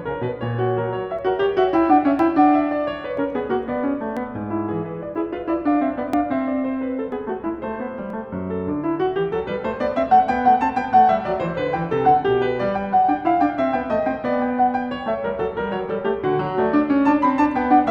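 Small skips land in the music at 1.19, 2.19, 3.17, 4.17, 5.15, 6.13, 7.12 and 8.10 s, roughly once per second. This is overlap between stream segments. Overlapping time stamps make the player discard a few milliseconds of music, so the waveform jumps.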